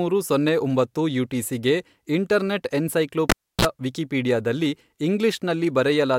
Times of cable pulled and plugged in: 3.30-3.65

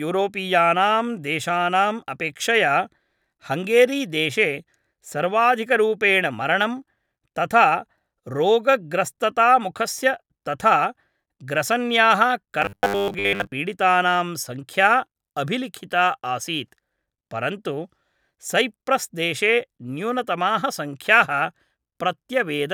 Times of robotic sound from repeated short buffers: 12.62-13.52

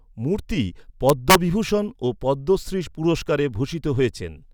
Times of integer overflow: 1.09-1.35

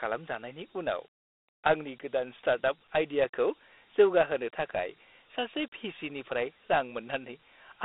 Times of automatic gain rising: none

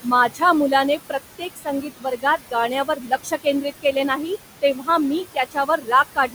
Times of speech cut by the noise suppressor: 0.29-0.42, 1.38-2.54, 2.85-3.46, 4.62-4.88, 5.34-5.88, 6.15-6.35

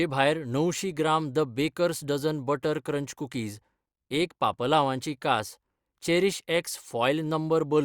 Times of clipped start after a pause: none

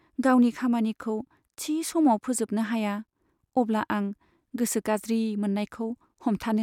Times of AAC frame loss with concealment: none

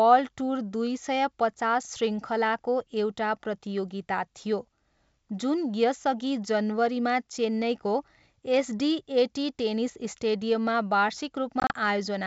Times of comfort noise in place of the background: none

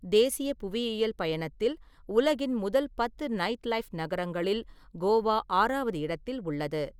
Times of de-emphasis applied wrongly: none

